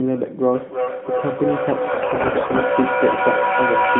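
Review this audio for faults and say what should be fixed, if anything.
Feedback echo between two devices runs from 0.53 s to the end. The speech returns about every third of a second. Repeats reach the speech's own level and pile up. The cause is a second device on the call playing the first microphone's signal back into it, beyond that microphone's echo canceller.

AMR bit errors hit from 1.92 to 2.65 s. The speech keeps its pitch but turns hoarse and gargly. This fits roughly a tenth of the weakly protected bits in the mobile frames arriving flipped on a poor link, while the narrowband AMR coding itself is audible only as the usual phone-band dullness.

To prevent this, mute or remove the second device in the room and move the call onto a stronger mobile signal.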